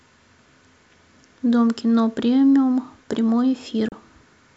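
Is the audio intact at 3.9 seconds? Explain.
No. At 3.88 to 3.92 s there is a digital broadcast dropout. The receiver lost about 32 ms of the signal, which fits a single frame failing its check, and muted with a 3 ms fade rather than play corrupt data. The speech breaks off in a brief hole and resumes, and what fell in the gap is gone. The waveform shows a sharp taper to silence, and the spectrogram shows a thin, blank vertical stripe across all frequencies.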